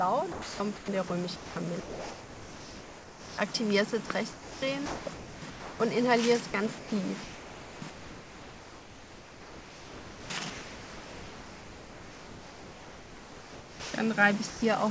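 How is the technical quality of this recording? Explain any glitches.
The recording is repeatedly broken up, with the sound flickering against a synthetic noise floor for most of its length, and a short drop near the end. Everything is band-limited, with nothing above 8 kHz, consistent with a G.722 call path.

Sound chopped by the voice detector occurs at 0.32 to 1.10 s (about 420 ms replaced), 1.36 to 3.54 s (1.8 s), 4.06 to 5.80 s (1.12 s), 6.50 to 6.92 s (180 ms) and 7.24 to 13.94 s (6.42 s). Quieter portions vanish into hiss and return abruptly. The likely cause is the sender's detector toggling transmission, with the receiver inserting comfort noise for each gap.

Sound dropped by the voice detector occurs from 14.50 to 14.62 s, where 120 ms of sound gives way to comfort noise before the signal resumes. A single pause in sending, filled by generated comfort noise, likely explains this brief hole.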